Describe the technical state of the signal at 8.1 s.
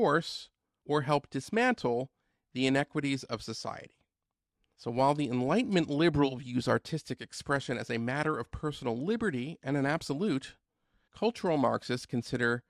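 At 8.1 s the speech carries MP2 compression damage, present across the whole clip: it sounds dull, with a gurgling, granular edge. The likely cause is MPEG Layer II coding starved of bits, consistent with roughly 80 kbps, switching off upper sub-bands. A spectrogram shows flickering, blocky gaps above a ragged cutoff.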